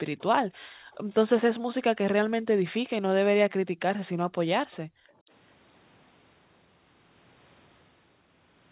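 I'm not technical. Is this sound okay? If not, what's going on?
No. Two things are going on.

From 0.19 to 0.23 s there is a very faint, brief copy of the speech, arriving about 0.43 s late. This is likely an echo leak. The other person's loudspeaker played the call, their microphone caught it, and it came back.

The background is gated by the echo canceller three times: 0.46 to 1.03 s, 3.72 to 3.76 s, and 4.56 to 5.3 s. The room sound suddenly drops away, then returns. The echo canceller turned the microphone down hard while the loudspeaker was playing.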